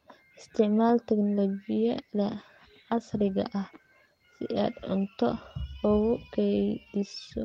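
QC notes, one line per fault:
1.78–5.65 s, call bitrate drop: the speech turns rougher and more coarsely coded for almost 4 s, holding at its worst for about 3.1 s before clearing. The sound fits the encoder being told to spend far fewer bits, which fits a fall from 32 to 16 kbps. Unlike packet loss, there are no gaps, dropouts or concealment warbles. The degradation is continuous, then lifts as the bitrate recovers.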